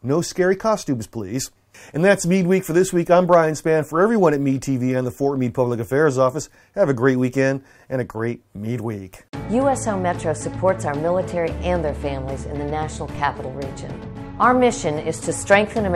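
At 13.15 s a DC step shifts the zero line by about -30 dBFS, then decays through a 5 Hz high-pass, producing a single low thump while the sound continues.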